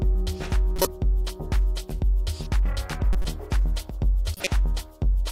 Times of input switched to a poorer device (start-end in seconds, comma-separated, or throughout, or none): none